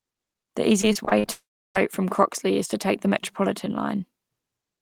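From 0.81 to 1.29 s, repeated packet loss (robotic sound) turns the speech choppy: short holes, the longest about 45 ms, are patched by repeating the preceding sound. From 1.31 to 1.77 s, one long gap replaces the speech: a brief fading buzz or hiss, then about 0.33 s of silence, likely a long network dropout rather than scattered losses.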